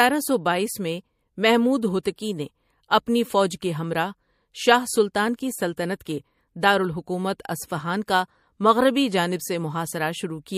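Pre-echo smears three speech attacks, at 2.03–2.05 s, 2.16–2.18 s and 5.36–5.39 s. Noise rises about 22, 19 and 14 dB for 20–32 ms before each onset, fitting a roughly 36 ms transform block with no short-block switching. Unlike reverberation, the hiss comes before the attack, not after it.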